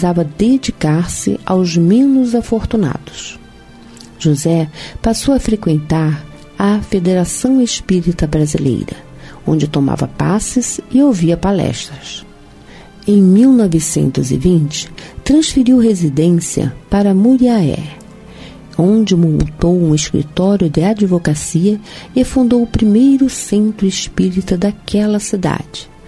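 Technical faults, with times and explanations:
No technical faults detected.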